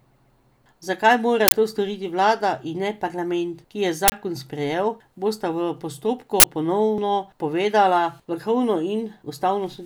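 An uninitialised buffer, playback reading leftover memory before any audio was written, produces 40 ms bursts of loud digital noise at 1.48–1.52, 4.08–4.12 and 6.40–6.44 s in this speech.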